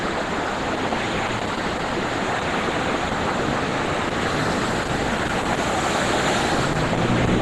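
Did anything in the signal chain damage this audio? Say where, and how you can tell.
Yes, at the codec stage. The whole clip sounds muffled and hoarse, grainy in place of clean detail, with nothing above about 12.1 kHz. That's likely Opus compression at a very low rate, around 12 kbps, pushed into its hybrid speech mode with a narrowed band.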